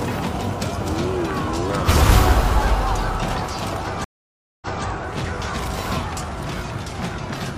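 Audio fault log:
4.04–4.85 s, stream reconnect: the audio cuts to dead silence for about 0.57 s, then comes back about 0.23 s earlier than where it stopped, so a short stretch is heard twice. The connection dropped, and the player went quiet while it reconnected and started a fresh decoder partway through the stream. The server then resent a little of what had already played, which causes the brief repeat just after the gap.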